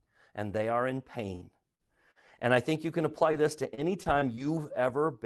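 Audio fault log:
1.35–1.44 s, burst of packet loss: after "and they are in", about 60 ms of speech never arrives. The receiver stretches the last sound and fades it, then jumps ahead.
1.41 s and 3.33 s, lost packet rebuilt from error correction: two 20 ms frames are decoded from Opus redundancy carried in the next packet. There is no gap, but each frame sounds briefly rougher and noisier.
1.75–1.82 s, 2.11–2.18 s, 3.31–3.36 s, short concealed packet loss: three brief losses of about 40, 40 and 20 ms are bridged by extrapolating the preceding sound. Each is heard as a short smear or wobble; the last falls between "I think you can" and "this to".
3.75–4.39 s, repeated packet loss (robotic sound): four gaps, the longest 26 ms, recur closely across this stretch. About 13% of it is patched by concealment and around 70 ms by error-correction copies, so the sound turns choppy with pieces missing.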